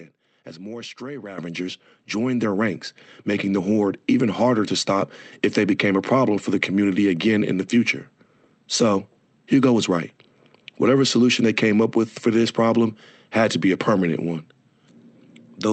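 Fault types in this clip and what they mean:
Microphone volume stepped up: at 1.38 s, speech and background jump together by about 10 dB because the input volume was raised in one step.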